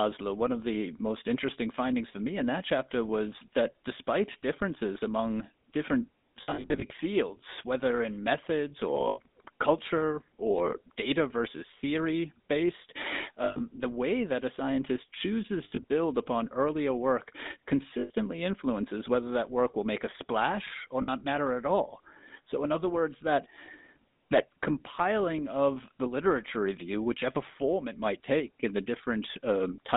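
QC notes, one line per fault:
Throughout, GSM full-rate codec: the speech has a buzzy, gravelly roughness. The band runs from about 200 Hz to 3.7 kHz, so there is no air above it, which fits 13 kbps full-rate GSM. The excitation is rebuilt from regularly spaced pulses with only every third sample kept. Unlike a plain band-limited line, the grit rides on the voice itself and gets harsher as pitch rises.
6.42–6.92, 9.08–9.19, 13.44–13.61, 15.64–15.84, 18.00–18.11 and 21.02–21.24 s, lost GSM frames: the longest is right after "despite differences among different", with about 280 ms missing in short runs spread over half a second. Each gap is filled by repeating the last good frame, so the sound hangs as a brief metallic ring. That sets it apart from a packet dropout, which goes silent or clicks instead of ringing.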